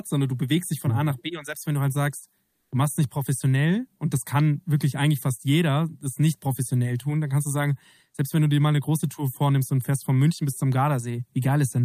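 Between "wenn du halt sagst" and "du machst es nicht", from 2.45 to 2.71 s, the background is replaced by comfort noise for about 260 ms: a steady, featureless hiss about 4 dB off the real floor, likely Opus DTX filling a transmission pause.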